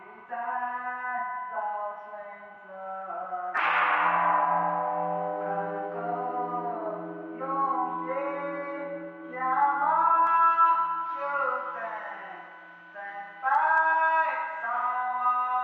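From 10.27 s to the end, pre-emphasis is left on. A treble boost applied before recording or transmission was never undone by the matching cut. The top end rises steadily, reaching about 11 dB more at 10 kHz than at 1 kHz. The shape of the lift fits the J.17 emphasis curve. The sound turns thin and bright. Sharp, sibilant edges jump forward, while the body of the sound recedes.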